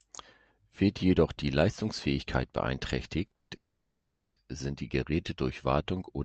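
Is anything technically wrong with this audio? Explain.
Yes. There are two timing faults in this speech clip, back to back, both just before "sind die". The audio has passed through a call codec path, and its top end stops at about 8 kHz, which fits Opus in its wideband mode.

From 3.25 to 3.50 s there are repeated stalls (stutter). The jitter buffer ran dry four times in a quarter of a second, and the receiver stretched the preceding sound to cover about 170 ms, roughly two thirds of that span. The longest single gap was 120 ms. Nothing is lost, but the speech catches and drags in short, uneven hiccups.

From 3.56 to 4.38 s there is a call audio freeze. For about 800 ms the sound is held, first as a fading continuation of the last sound and then as about 460 ms of silence. After that, the speech resumes exactly where it stopped, with nothing skipped. The likely cause is packets held up in transit, which emptied the jitter buffer and pushed playback about 800 ms later from that point on.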